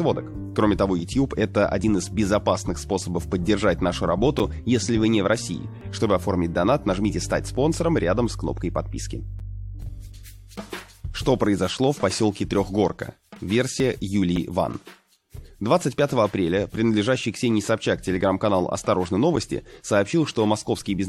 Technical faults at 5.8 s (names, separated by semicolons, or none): overlap between stream segments